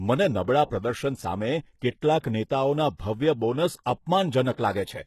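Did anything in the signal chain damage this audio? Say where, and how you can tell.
Yes, at the codec stage, throughout the speech: the treble sounds bright yet gritty and metallic, with s sounds lispy and nothing above 12.3 kHz. That points to heavy, likely HE-AAC compression at a low bitrate near 16 kbps, where band replication copies lower harmonics upward instead of simply dulling them as a plain low-pass would.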